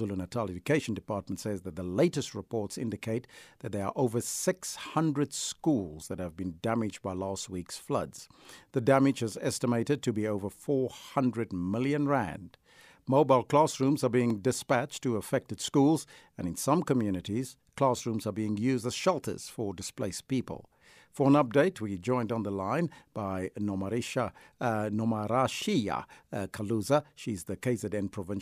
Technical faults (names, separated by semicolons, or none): block of digital silence